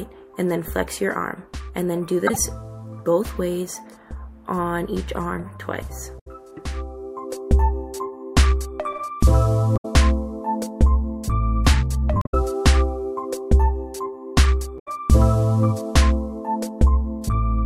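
Damaged data in a compressed stream appears five times: 2.27–2.37 s, 6.15–6.28 s, 9.73–9.85 s, 12.19–12.34 s and 14.76–14.88 s. Each lasts roughly a tenth of a second. Corrupted bytes at these points leave the decoder unable to read the affected frames, so it loses sync and hunts for the next valid frame header. The gap is heard as a brief chirp, squawk, click or short hole that breaks into the sound.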